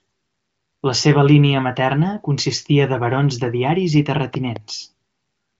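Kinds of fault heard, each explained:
Loud pop: Two sharp pops in quick succession between 4.35 and 4.58 s, peaking roughly 5 dB above the speech, which carries on underneath. The likely cause is a sudden voltage pulse from a plug, switch or static discharge entering the signal chain.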